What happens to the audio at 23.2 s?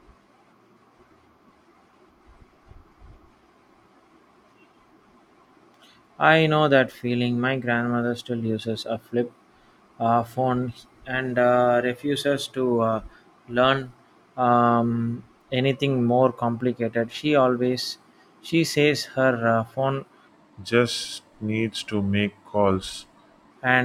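At 23.2 s the speech sits inside a section at the wrong speed, running from 20.27 to 23.51 s. This was likely caused by a player or editor running that stretch against the wrong clock, so it plays at 0.858 times its recorded speed. Because speed and pitch move together, the voice drops about three semitones and slows, sounding deeper and heavier until normal speed returns at 23.51 s.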